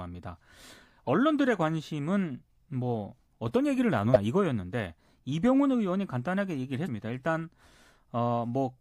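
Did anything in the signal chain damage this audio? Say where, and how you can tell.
Yes. Damaged data in a compressed stream, at the codec stage: brief glitches at 1.07 to 1.09 s, 4.12 to 4.16 s and 6.83 to 6.88 s. Corrupted bytes made the decoder misread frames, lose sync and hunt for the next valid header.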